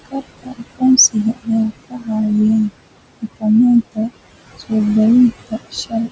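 Noise suppressor artifacts run through the whole clip. The suppressor pulls down the bands it judges to be steady background by about 20 dB, frame by frame, so the room noise, sitting roughly 14 dB under the speech, drops away in the pauses and swells back whenever someone talks. The voice sits within a band that stops at 8 kHz.

Speech cut by the noise suppressor appears three times: 0.39 to 0.62 s, 1.34 to 1.48 s, and 1.89 to 2.09 s. In each stretch the suppressor mistakes quiet parts of the speech for noise and turns them down along with the background, by as much as about 20 dB. Roughly a tenth to a fifth of a second of sound is affected each time, so soft consonants and word tails come across as swallowed or suddenly faint.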